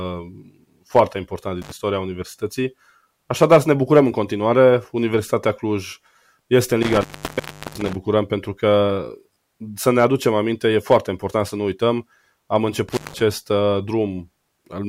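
A speech recording with an intermittent contact fault. The signal drops out three times. Each gap is bounded by crackle as a loose plug or cable breaks and remakes the circuit. The first opens near 1.62 s for about 56 ms. The longest runs from 6.82 s to 7.95 s, open for about 0.72 s. The last falls at 12.89 s to 13.21 s, open for about 168 ms. Faint hiss remains during each gap.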